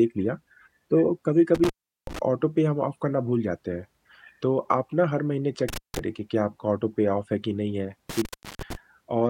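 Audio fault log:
1.55–2.19 s, intermittent contact: a loose connection opens for 378 ms, cutting the speech with crackle at each edge and leaving faint hiss.
5.69–5.99 s, intermittent contact: the line breaks again for 166 ms; crackle marks the break and reconnection, with faint hiss filling the gap.
8.09–8.75 s, intermittent contact: a 343 ms dropout as the plug or cable loses contact, crackling where the connection fails and returns, faint hiss between.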